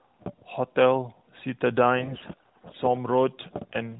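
A speech clip over a narrowband mobile link. From 2.00 to 2.77 s, AMR bit errors turn the voice hoarse and gargly. Around one bit in ten in each frame's less protected data arrives flipped.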